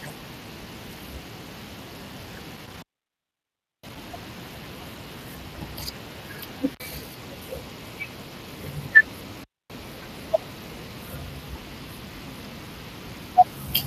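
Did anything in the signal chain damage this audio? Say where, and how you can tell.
Yes, two stages. The codec stage shows plainly audible Speex codec damage across the whole clip. The speech has a grainy, hoarse texture from the thin excitation coding, which fits a bitrate around 22 kbps, and there's nothing above 15.2 kHz.

Further upstream, the analogue wiring has an intermittent contact. The sound drops out at 2.57–4.09 s (open for about a second), 6.73–6.80 s (a 54 ms gap) and 9.40–9.71 s (about 258 ms). There's crackle as the connection breaks and remakes, with faint hiss while the line is open.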